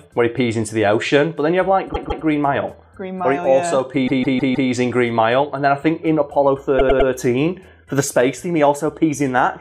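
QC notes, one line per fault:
1.92–2.24 s, repeated frames: a 157 ms block of compressed frames, which fits six frames of about 26 ms, was played two extra times, so the same slice stutters and the audio runs 314 ms long.
4.06–4.69 s, repeated frames: the same 157 ms block length looped four extra times, a longer stutter adding 627 ms.
6.78–7.09 s, repeated frames: a shorter 105 ms block repeated three extra times, adding 314 ms.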